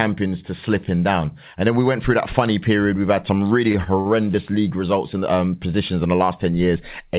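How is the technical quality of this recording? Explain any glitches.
The speech has three short stalls from late packets, heard over narrowband telephone-style audio with nothing above 4 kHz, which fits a 64 kbps G.711 mu-law call codec. The stalls fall at 3.72 to 3.76 s, 3.84 to 3.88 s and 4.00 to 4.07 s. Each time the jitter buffer ran dry and the receiver stretched the last sound, by about 19, 22 and 52 ms, giving a held, faintly buzzy moment. Unlike a packet-loss gap, nothing is dropped. Speech resumes from the same point, just slightly later.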